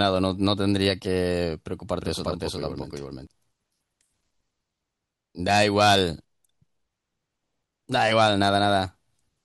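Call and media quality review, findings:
Doubled audio track, 2.01 to 3.27 s. Speech heard twice, second copy about 0.4 s behind, about as loud as the original. Copy is full-band and dry, no room colour. Starts and stops abruptly. Likely cause: second capture through a slower path mixed back in.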